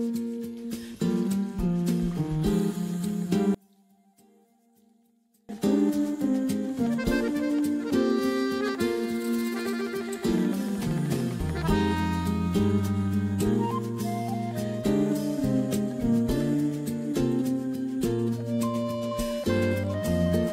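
From 3.55 s to 5.49 s the audio drops by about 35 dB, background included, then returns at full level. The likely cause is one channel inverted: one side of a stereo source had its polarity reversed, so when the two sides were summed to mono, the material common to both cancelled. What remains during that stretch is only the small difference between the channels, heard as a much quieter residue of the sound.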